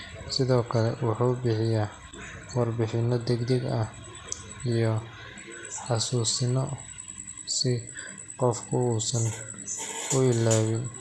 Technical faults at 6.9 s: MP2 compression

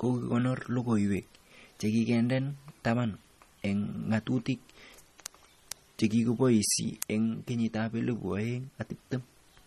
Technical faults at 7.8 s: MP3 compression

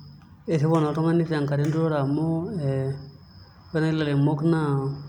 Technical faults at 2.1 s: none

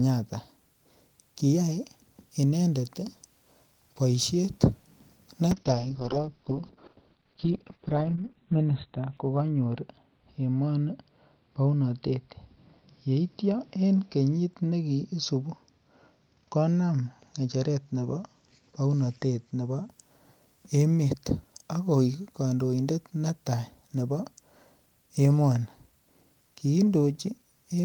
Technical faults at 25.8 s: none

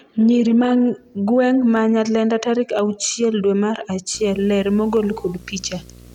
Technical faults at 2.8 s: dropped samples

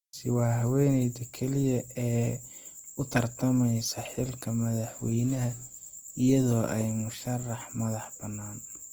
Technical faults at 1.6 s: Opus compression

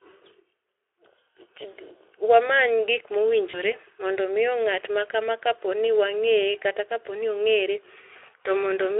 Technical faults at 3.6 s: VoIP packet loss concealed by the speech codec

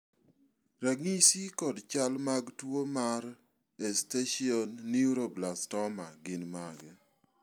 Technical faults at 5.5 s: none

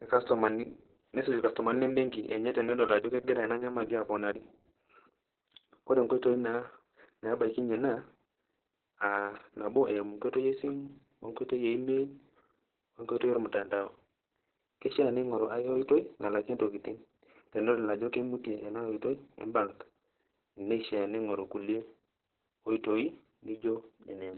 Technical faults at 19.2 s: Opus voice compression

